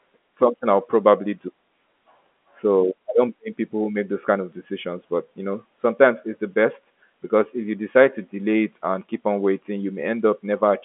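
Listening to this speech closely, nothing stood out as a technical fault, with the sound sitting in the narrow telephone band that G.711 A-law coding gives and nothing heard above it.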